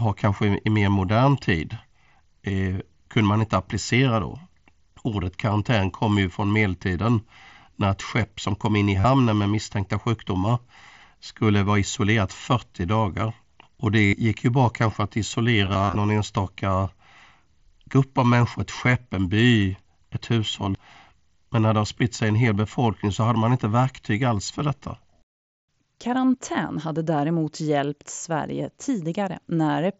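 Concealed Bluetooth headset packet loss hits at 9.00–9.05 s (between "som kom in i" and "med misstänkta sjukdomar"), 14.06–14.13 s, scattered through 15.65–15.95 s after "ju bra kanske att", and 17.91 s before "av människor ett skepp". Dropped headset packets get patched with repeated recent waveform, giving brief buzzy tones and a small warble as real audio resumes.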